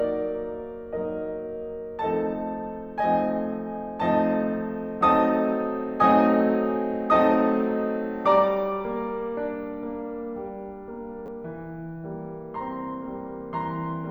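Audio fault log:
11.26–11.28 s, chunks out of order: in the music, a 10 ms chunk plays one chunk late, after the chunk that should follow it, so the sound jumps ahead, back, then on, with three hard joins. Unlike a dropout, nothing is missing; unlike a repeat, nothing plays twice.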